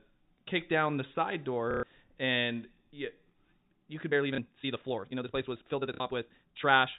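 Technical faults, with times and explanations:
1.71–1.83 s, 4.35–4.38 s, 5.94–6.00 s: packet loss with last packet repeated. After "kick down the side" and before "and you", 120 ms of audio is replaced by the same short chunk played over and over. That gap fits four 30 ms packets. The two later gaps are 30 ms and 60 ms. Because each repeat is out of step with the pitch, the longest run gives a robotic buzz at about 33 Hz.
4.05 s to the end: time-stretched section. From here the pace jumps to about 1.67 times normal while the pitch stays where it was. The result sounds rushed. The likely cause is software squeezing this stretch to fit a shorter length by dropping short pieces of the waveform, which keeps pitch intact but breaks the continuity between segments.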